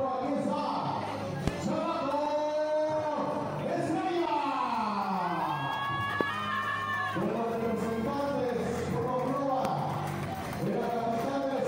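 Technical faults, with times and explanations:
1.48–1.50 s, 6.21–6.23 s, 9.65–9.67 s, loud pop: one sharp pop each time, about 15 dB above the sound at first, then about 20 dB, while the sound carries on beneath. Likely a brief voltage spike from a plug, switch, static or driver glitch.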